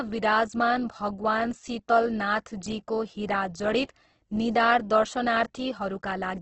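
Speech throughout, with heavy damage from likely Opus compression in its CELT music mode. Nothing reaches above about 8.2 kHz, and the voice sounds grainy, rough and noisy rather than swirling or full of holes. That distinguishes it from MP3, whose dropped bands warble. Here each band keeps its energy but is filled with folded or noise-like content once the bits run out, which fits a starved rate near 12 kbps.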